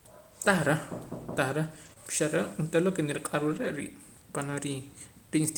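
A speech clip with two kinds of network fault. At 1.85 to 1.91 s and again at 3.52 to 3.66 s, there is a lost packet rebuilt from error correction. About 40 ms and then 80 ms of sound turn rougher and noisier, with no gap. That fits two and then four lost packets. The following packets each carried a low-bitrate spare copy of the missing ones, and the decoder played those coarser copies instead. Right after the first, at 1.93 to 1.98 s, comes a short concealed packet loss. About 20 ms never arrived in time. The receiver extended the preceding sound for about 22 ms and then blended back into the real signal. This leaves a brief smear or wobble, and a short sound at that spot can drop out.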